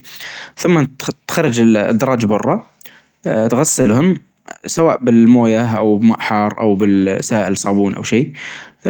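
At 1.53 s, a lost packet was rebuilt from error correction: about 20 ms of speech never arrived, but the next packet carried a low-bitrate backup copy, which the decoder played instead. There is no gap, only a brief roughening and extra noise in the sound.

A short concealed packet loss follows at 3.81 to 3.87 s. About 40 ms of audio was missing with no copy available, so the receiver extended the preceding sound, following its pitch or shaping noise, and then blended back into the real signal. This is heard as a quick smear or wobble, and a short sound may drop out.

Overlapping that, from 3.85 to 3.99 s, another run of about 80 ms was rebuilt from error correction, across four lost packets. It sounds coarser and noisier over that stretch.

At 4.77 s, a single 20 ms rebuild brings another momentary roughness.

From 6.81 to 7.03 s, about 120 ms was reconstructed from the backup copies. 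This is the longest rebuilt stretch, and it sounds rough and noisy.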